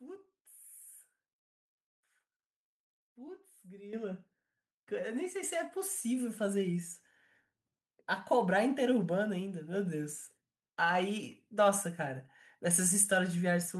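The microphone volume was stepped up twice, at 3.93 s and 5.43 s, so speech and background jump together, by about 10 dB and then about 3 dB.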